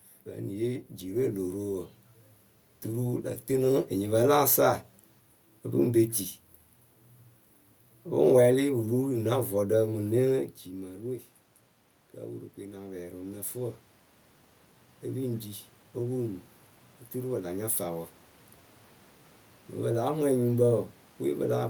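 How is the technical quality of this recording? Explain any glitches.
The one real glitch is automatic gain rising, which happens three times. From 8.72 to 11.33 s, 12.59 to 13.85 s and 15.05 to 18.08 s, the gain control hears a quieter input (around 13 s the level drops by about 16 dB) and slowly pushes up by about 3 to 4 dB, so voice and room noise swell together. The level change near 10.5 s is just the talker moving.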